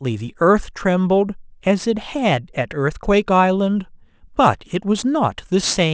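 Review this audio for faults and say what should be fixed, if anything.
Aliasing runs through the whole of the speech. The sample rate was reduced without a low-pass filter, so content that sat above the new 8 kHz limit folded back below it. Sibilants come out gritty and metallic, with the folded energy sitting roughly 25 dB under the signal. This fits a conversion from 24 kHz down to 16 kHz. On a spectrogram, energy runs hard up to 8 kHz with mirrored streaks beneath it. Apply an anti-aliasing low-pass filter below the new half-rate before resampling.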